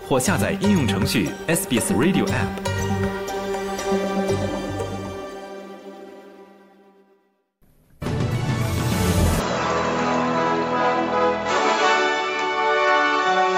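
From 9.40 s to the end, the sound turns duller and boxy with no gap, and nothing remains above 7.6 kHz. The likely cause is the input switched to a poorer device. On a spectrogram the upper band ends abruptly at 9.40 s; the waveform level stays about the same, with a faint new noise floor roughly 45 dB down.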